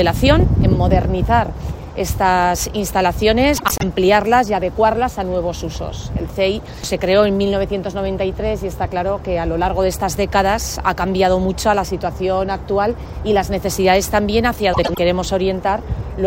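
Frames out of order occur twice, at 3.57 to 3.83 s and again at 14.73 to 14.98 s. Each time, two adjacent blocks of roughly 104.5 ms arrived swapped and were decoded in that order, which points to runs of about four frames each. The quarter-second stretch plays with its halves exchanged, giving a garbled flutter, while the overall timing stays intact.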